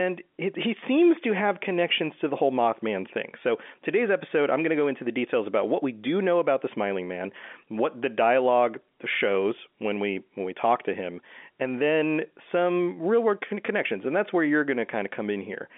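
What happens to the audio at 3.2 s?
Nothing goes wrong at 3.2 s: the speech passes through intact, carrying only the narrow telephone band of the G.711 line, with nothing above about 3.7 kHz.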